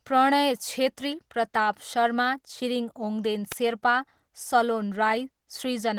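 Throughout, the speech carries Opus voice compression, hoarse and slightly robotic, fitting about 16 kbps hybrid coding. The spectrogram shows blocky, smeared texture in the upper band.

At 3.52 s an electrical switching spike, likely from a nearby switch arcing, gives a sharp snap or tight cluster of clicks, seen as a thin full-height line.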